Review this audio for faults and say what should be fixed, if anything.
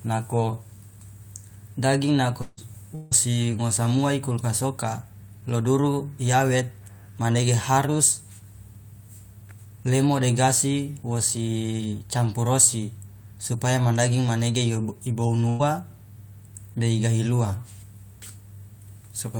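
Two short gaps near the start sound like a likely long network dropout, at 2.41 to 2.60 s and again at 2.95 to 3.14 s. Each time about 160 ms of audio goes missing, and the receiver covers the whole stretch by stretching out the last sound, so you hear a smeared, fading buzz or hiss rather than any silence. The speech picks up afterward with that chunk gone. To prevent it, fix the network path or add more jitter-buffer headroom.

Right at the tail of each of those gaps, and once more later, a single packet was rebuilt from error correction: 2.57 to 2.59 s, 3.11 to 3.13 s, and 15.59 to 15.61 s, each 20 ms. The next packet carried a low-bitrate backup copy (Opus in-band FEC), and the decoder played that instead of leaving a hole. So there's no gap, just a brief rougher, grainier moment. Keeping in-band FEC enabled is the right call here, and reducing loss upstream would make these repairs rarer.

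At 15.49 to 15.62 s there's a burst of packet loss where about 100 ms in a row didn't arrive in time. The receiver held the last sound and let it fade across the gap, giving a short held buzz or fading hiss, then the audio resumes a little further on with that slice missing. It includes the FEC-rebuilt frame at 15.59 s. Smoothing out network congestion, or using a larger jitter buffer, would stop bursts like this.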